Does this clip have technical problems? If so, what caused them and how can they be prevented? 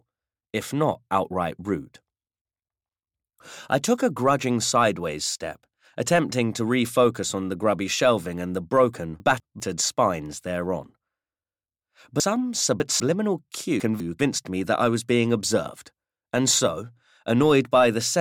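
Yes. Chunks out of order at 9.2–9.6 s, 12.2–13.0 s and 13.8–14.2 s: a 200 ms block plays one block late, or three late at 12.2 s, giving a jumbled moment. Unlike a dropout, nothing is missing. Reordering blocks by sequence number before playback prevents it.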